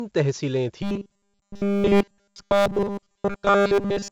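The speech in this clip has been through 4-bit ADPCM compression, which codes every sample as a coarse 4-bit step from a predicted value. That leaves heavy grainy hiss riding on the speech, following its level some 20 to 30 dB below it, rough edges on sharp onsets where the step size lags behind, and nothing above 8 kHz, a dull top end that fits a stream of about 64 kbps. From 0.82 s to the end, the audio is further damaged by robotic sound from repeated short buffers. The likely cause is playback starved of new data and covering the gaps by looping the last short block over and over while the real audio is skipped. All of the sound in that stretch is repeated material. The loop imposes a fixed 200 Hz buzz, pointing to a block of about 5 ms, so the speech turns into a rigid, metallic drone that only loosely tracks the original.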